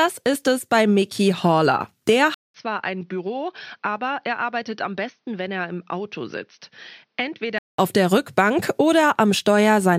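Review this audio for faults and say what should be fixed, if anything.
From 2.34 s to 7.78 s the speech turns dull and about 10 dB quieter, with nothing above 6.2 kHz, a faint new noise floor and a 0.2 s gap at the switch. The dull sound begins at "auf der". The likely cause is an input switched to a poorer device. Lock the recording input so the system cannot change devices mid-session.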